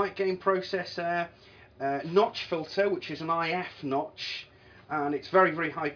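No technical faults can be heard anywhere here.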